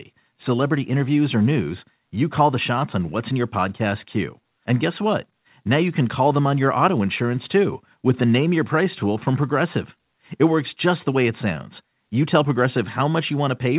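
No technical faults can be heard in the speech, which has the narrowband sound of a telephone-grade call path with nothing above 4 kHz, consistent with G.711 A-law coding at 64 kbps, along with the trimmed lowest bass of normal call microphone processing.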